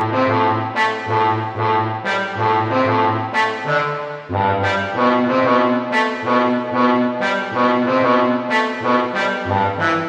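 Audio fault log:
Throughout: channel delay (comb filtering). One channel lags the other by around 10 ms, and the two are summed to mono. Shared content cancels in fixed, evenly spaced notches, the first near 40 Hz. The sound comes out hollow and phasey.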